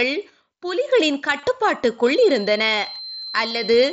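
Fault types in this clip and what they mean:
Concealed Bluetooth headset packet loss: voice packets between headset and phone went missing at 1.40 to 1.43 s (about 30 ms) and again at 3.48 to 3.51 s (about 23 ms), which fits runs of four and three lost frames. The receiver filled each gap by repeating the best-matching stretch of recent waveform, so each shows as a brief buzzy, held tone at full level, with a slight warble as the real audio resumes.
Feedback whistle: from 2.0 s to the end of the clip, a thin, steady tone at 4.1 kHz sits well below the speech level, swelling and fading slowly in strength. A single high frequency keeps ringing without growing, which points to a loop between loudspeaker and microphone held just short of runaway feedback. That is the likely cause. Underneath, the mSBC headset codec passes speech up to 8 kHz with light graininess.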